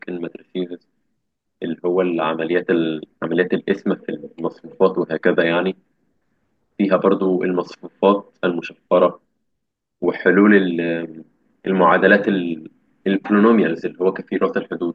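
Speech recording, with no technical faults to report.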